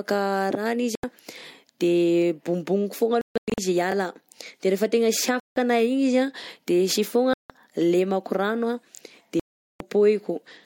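Speech with a likely Bluetooth dropout problem: the sound cuts out at 0.95, 3.21 to 3.58 (broken up), 5.40, 7.34 and 9.40 to 9.81 s, then carries on as if it had kept playing. There are also overlapping chunks. About 25 ms repeats at 3.92 and 8.97 s, heard as a stutter where 2.5 s chunks join.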